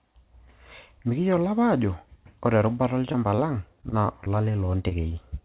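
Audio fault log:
3.12–4.28 s, repeated packet loss (robotic sound): right after "apa ajo ore erubata", five short holes, the longest about 22 ms, were each patched by extending the preceding sound. That patching covers about 8% of the stretch and gives a choppy texture. Because the gaps keep recurring, this reads as a sustained roughness rather than a single blip.
4.89–4.93 s, short concealed packet loss: one isolated hole of about 20 ms was filled with roughly 22 ms of continued sound, then blended back into the real signal. It comes through as a single brief smear or wobble in the narrowband G.711 audio, which has nothing above 4 kHz. Unlike the earlier run, nothing follows it.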